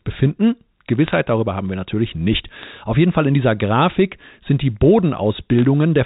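Bit errors on a digital phone line hit the speech three times: a cluster of sharp ticks from 1.07 to 1.15 s, a shorter burst from 2.63 to 2.65 s, and a brief burst at 5.59 s. On the 64 kbps G.711 mu-law line, each flipped bit corrupts one sample. A hit on the sign or upper bits throws that sample far from its neighbours, giving crackle at an error rate of a few tenths of a percent while the speech underneath stays unchanged.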